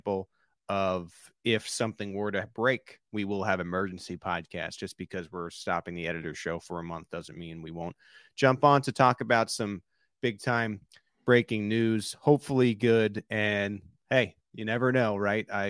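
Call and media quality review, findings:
No faults found in this speech clip. Nothing to raise against any component.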